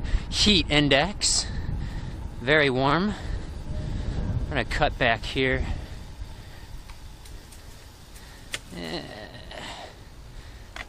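No technical faults are audible.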